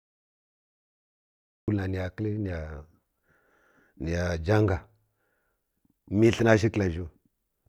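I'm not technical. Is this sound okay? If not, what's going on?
No. The clip has a cut-off start. For the first 1.68 seconds there is complete digital silence. Then the speech appears suddenly, already partway through a sound. Nothing builds up or eases in. It is as if the recording was switched on a moment too late and caught the talking in the middle. So the very beginning of what was said is simply missing, and the entry at 1.68 seconds sounds abrupt rather than natural.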